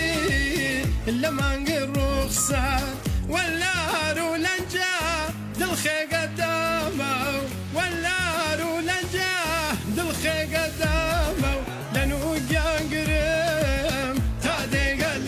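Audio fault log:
No faults detected anywhere in the audio.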